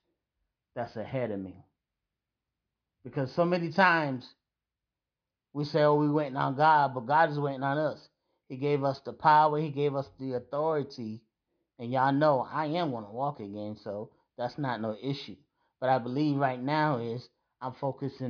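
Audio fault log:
Nothing stood out on listening to this speech clip.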